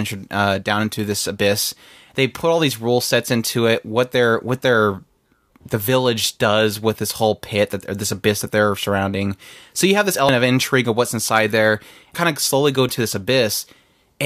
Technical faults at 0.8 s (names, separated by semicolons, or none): none